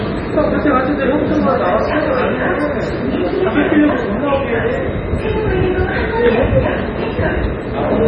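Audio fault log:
Throughout, MP3 compression: nothing above 9.2 kHz and watery, swirling artefacts, likely from a very low bitrate, around 24 kbps, starving the encoder.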